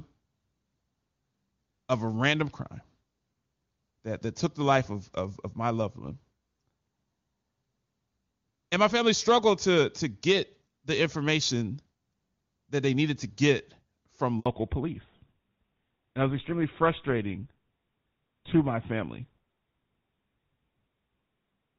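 Right after "needed to get from", at 14.40 to 14.46 s, the speech drops into a handover gap: the call is passed between networks and no frames arrive for 60 ms. The sound cuts to true silence rather than a smeared or buzzy patch, which marks it as a clean handover gap rather than concealed packet loss.

From 14.46 s to the end, a fallback to narrowband follows: the call leaves HD Voice, where the AMR-WB coding at a rate consistent with 23.85 kbit/s sounded clear, for an older codec, consistent with GSM full rate. Nothing above 4 kHz remains, so the voice turns dull and rough. That rasp, and the fact that the change lands exactly at the gap, set it apart from a simple low-pass filter.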